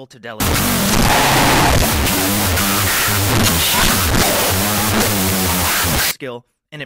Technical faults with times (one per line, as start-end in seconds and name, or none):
0.40-6.11 wrong sample width